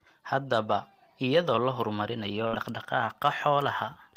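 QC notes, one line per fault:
0.34–0.72 s, hard clipping: peaks overdriven by about 2 dB are cut flat, adding upper harmonics heard as crackle on the loudest speech.
2.47–2.56 s, burst of packet loss: after "la horumarinayo", 55 ms of concealment holds and fades the last sound. Then 60 ms of speech is skipped.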